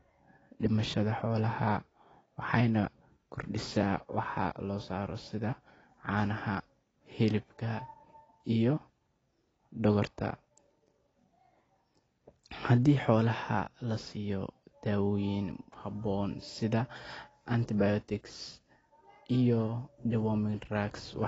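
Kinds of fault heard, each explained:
AAC compression: The speech sounds dull and smeared, with a warbling, fizzy texture on sibilants, likely from AAC-LC coding at a low bitrate, which fits roughly 24 kbps. A spectrogram shows a hard ceiling at 8 kHz.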